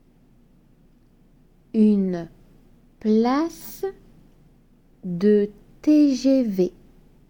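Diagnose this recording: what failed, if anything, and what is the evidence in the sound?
Nothing in the audio points to a failure at any stage, so there's nothing here to diagnose.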